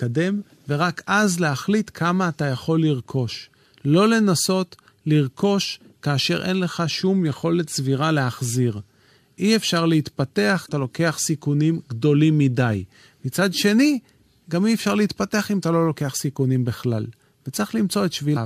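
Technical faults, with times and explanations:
10.65 s and 18.33 s: damaged data in a compressed stream, two brief glitches of about 40 ms each where the decoder misreads corrupted frames and resynchronises.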